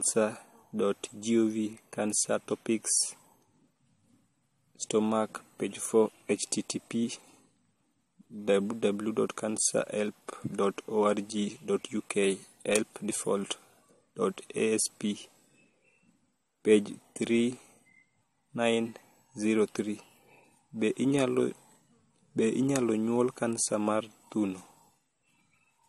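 Speech throughout, and nothing survives above about 13.9 kHz, so the top end sounds shut off. On top of that there's a layered smeary, swirly texture where two different sets of compression artefacts pile up. That's most likely transcoding between lossy codecs: the sound points to an MP3 pass at around 54 kbit/s followed by AAC-LC at around 48 kbit/s. The AAC stage wastes bits re-encoding the MP3's damage and adds its own, and the lower cut-off carries through.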